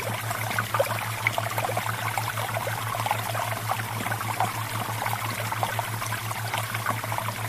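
Around 1.25 to 1.27 s there's a skip ahead: about a second of audio just isn't there, and playback jumps straight from one side of the hole to the other with no gap filled in. That's the signature of a chunk dropped either in transit or by the jitter buffer overflowing while later audio was already queued, so the receiver threw the backlog away and cut the delay by roughly that second in one go. Right after, from 1.41 to 4.36 s, you get a jitter buffer speed-up. The audio runs at about 105% of normal speed while keeping the same pitch, so it comes across a bit hurried. The receiver still had more buffered than it wanted, so it kept snipping out tiny pitch-period-sized pieces, removing roughly 150 ms in total over that stretch to pull latency back down.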